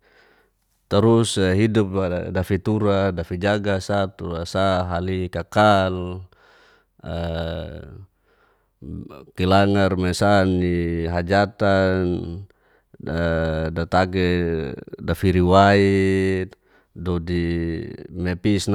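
No technical faults can be heard anywhere in the speech. Nothing in the signal departs from what an intact recording and playback chain would deliver.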